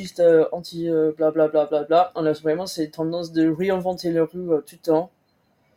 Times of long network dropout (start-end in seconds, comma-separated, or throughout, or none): none